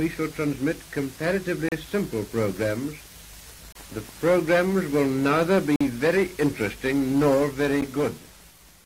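Short, hard-edged dropouts to silence cut into the sound at 1.69 to 1.72 s (about 34 ms), 3.72 to 3.75 s (29 ms), 5.76 to 5.81 s (48 ms) and 7.81 s (11 ms), recurring roughly every 2 s. These are gaps between stream segments. The timestamps of consecutive 2-second segments leave a small hole, which the player fills with silence. Nothing is lost, but the timeline is stretched at each boundary.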